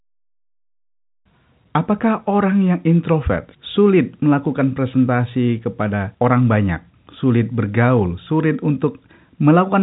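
There are no technical faults in this speech; it is ordinary telephone-band audio that stops at about 3.8 kHz.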